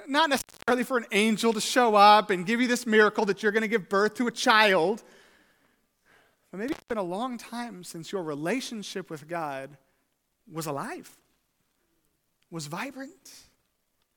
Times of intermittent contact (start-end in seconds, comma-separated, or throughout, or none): 0.36-0.71, 6.68-6.93